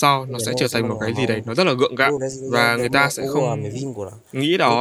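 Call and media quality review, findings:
Speech suppressed in double talk, 0.24–0.64, 0.82–1.5, 1.99–2.52, 2.96–3.89 s: speech dips, deepest about 15 dB near the start, shallower later. Likely the echo canceller ducking the near talker while the far end talks.

Echo leak, 3.11–3.15 s: faint delayed copy of the speech, 354 ms behind, about 30 dB below it. Likely residual loudspeaker echo that the canceller failed to remove.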